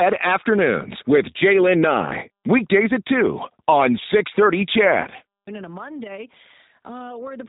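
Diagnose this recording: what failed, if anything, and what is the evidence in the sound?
The codec stage is at fault: the speech was coded with G.729 throughout, cutting everything above 3.8 kHz and rebuilding it from sparse pulses, which fits 8 kbit/s and sounds rough and synthetic.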